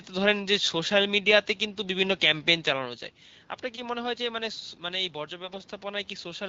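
From 5.44 to 5.58 s, AMR bit errors hit the weakly protected bits of the wideband frames, a few percent of them flipped, across a stretch that fits about seven 20 ms frames. Excitation pulses and fine pitch and gain values go wrong, so the speech keeps its rough pitch and level but turns briefly hoarse, scratchy and gargly.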